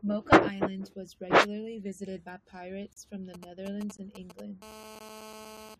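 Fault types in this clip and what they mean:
gap between stream segments: timestamps between one-second segments leave holes filled with silence; hard-edged dropouts of about 35, 18 and 16 ms at 2.93, 3.97 and 4.99 s.
GSM signalling bursts: a nearby 2G phone's intermittent radio bursts are rectified, giving galloping ticks and short 217 Hz buzzes from 3.34 to 4.64 s, about 15 dB below the speech.
GSM phone buzz: continuous 217 Hz transmission bursts from a phone in a call are rectified into a steady raspy, harmonic-rich buzz from 4.64 to 5.75 s, about 17 dB below the speech.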